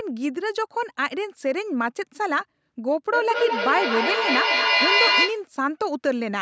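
From 3.13 s to 5.48 s the speech is caught in feedback echo between two devices. A second device in the room replays the call, and its microphone sends that sound back, out of reach of the other device's echo canceller. Each syllable returns about every fifth of a second, and the repeats build instead of fading, peaking about 3 dB above the speech. The waveform shows evenly spaced, swelling copies, and the spectrogram shows stacked, smeared bands under the call's 8 kHz ceiling.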